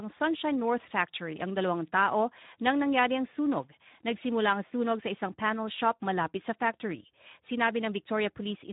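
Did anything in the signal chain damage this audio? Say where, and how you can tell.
Yes. The damage is at the codec stage: Speex coding runs through the whole clip. There is no energy above 3.8 kHz, which gives the speech a narrowband, telephone-like ceiling. The plainly audible hoarse, noisy grain on the speech comes from CELP coding that has too few bits to rebuild the excitation signal accurately. That roughness fits a low Speex setting at roughly 11 kbps. It is a lossy-compression artefact, not analogue or network trouble.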